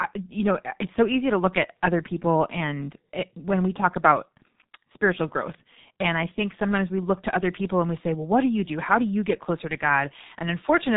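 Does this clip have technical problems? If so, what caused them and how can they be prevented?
Yes. The whole clip carries heavy G.723.1 codec damage. Nothing passes above 3.8 kHz, so a spectrogram shows an empty band over that line. Coarse 30 ms frames blur consonants into hoarse, muffled speech, which fits a 6.3 kbit/s stream. Prevent this by using a wideband, higher-bitrate codec.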